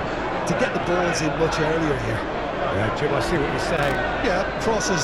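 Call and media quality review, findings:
Loose connector crackle, 3.77 to 3.95 s: irregular scratchy burst. Worn or dirty contact intermittently breaking the signal path, chopping audio.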